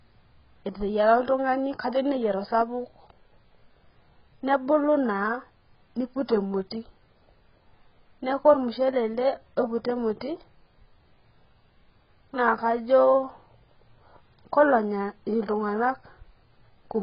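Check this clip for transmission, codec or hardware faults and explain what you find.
The speech carries a codec fault from start to finish, consistent with AAC compression at a very low bitrate. Nothing reaches above about 5.1 kHz, so the sound is dull, and sibilants and held vowels take on a fizzy, warbling smear. The damage is likely from AAC-LC working near 12 kbps: with so few bits, the encoder drops the top band and coarsely quantises what remains. That watery texture rules out a plain bandwidth limit, which would only sound muffled.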